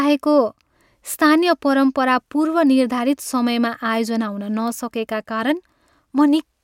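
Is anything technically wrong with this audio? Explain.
No, nothing is technically wrong with this audio.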